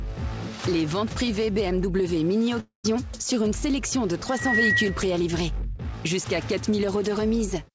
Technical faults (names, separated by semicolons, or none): long network dropout